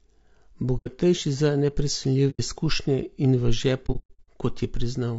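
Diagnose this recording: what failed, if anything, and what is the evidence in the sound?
Throughout the speech the voice sounds rough and grainy, with noise filling the gaps between harmonics and a thin, synthetic quality in the top band. This is a codec-stage fault, most likely low-delay AAC compression of the AAC-ELD kind used for video calls, at a rate that fits about 32 kbps. Its short frames resolve pitch harmonics poorly, so at this bitrate the encoder cannot code the harmonic structure cleanly and the damage is plainly audible.

AAC frame loss with muting appears as soft-edged dropouts at 0.77–0.88 s and 2.30–2.40 s, each roughly 90 ms long, consistent with about three lost frames. A longer disturbance runs from 3.86 to 4.29 s, where about 300 ms of audio vanishes in scattered gaps over roughly 420 ms, the longest around a tenth of a second. The fault sits at the network or transport stage. 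The decoder zeroes the missing frames, and the overlapping windows fade the sound out and back in.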